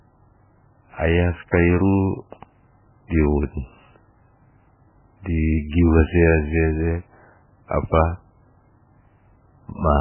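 Heavy MP3 compression likely runs through the whole speech clip, with the encoder starved of bits, which fits a very low bitrate near 8 kbps. To cope, it discards all content above 3 kHz and drops quieter frequency lines that then flicker in and out from frame to frame. The result is dull, band-limited speech with a watery, swirling texture, metallic chirps on s sounds, and consonant onsets that smear rather than strike cleanly.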